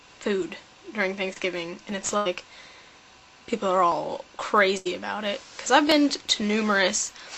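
The audio shows packet-loss damage at three points. Around 1.33 to 1.40 s there is a short concealed packet loss: roughly 20 ms of the stream never arrived, and the receiver filled about 25 ms by extending the preceding sound before blending back, leaving a brief smear. At 2.17 to 2.27 s and 4.77 to 4.87 s, each burst of packet loss drops about 80 ms. The gap is bridged by a continued sound that fades out as the concealment runs on, and the audio then resumes later with that stretch missing.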